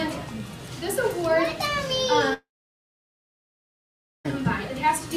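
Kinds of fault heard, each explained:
Long network dropout: at 2.33 s the audio cuts out, and what's left is a brief smeared continuation of the last sound that dies away fast, then roughly 1.8 s of near silence until things resume at 4.26 s. About 1.9 s of material is simply skipped rather than delayed. That pattern points to a likely stall in the incoming stream, with the receiver concealing briefly and then giving up.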